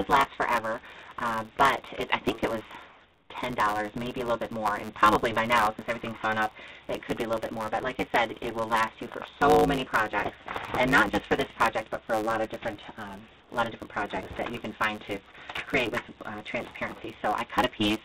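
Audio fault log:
throughout, block size mismatch (truncated): A steady buzz at about 109 Hz runs under the whole clip, and the audio plays about 1.16 times faster than it should while its pitch stays close to normal. One stage hands over longer blocks than the next stage takes in, so the end of every block is dropped. The buzz is the rate of those cuts, and the skipped material speeds everything up. The pattern fits 512-sample blocks being written.
2.89–3.30 s and 13.40–13.51 s, comfort noise in place of the background: In these two pauses the real background gives way to a flat, featureless hiss, about 4 dB quieter in the first and about 7 dB quieter in the second, until the sound picks up again. The likely cause is discontinuous transmission: the sender stopped sending audio during the gaps, and the receiver filled them with synthetic noise only roughly matched to a background sitting about 30 dB below the loud parts.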